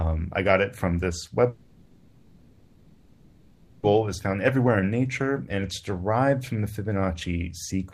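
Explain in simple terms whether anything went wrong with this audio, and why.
From 1.49 to 3.85 s the sound turns into a smeared buzz, then resumes with a chunk missing: likely a long network dropout. Unlike a brief glitch, it lasts over two seconds.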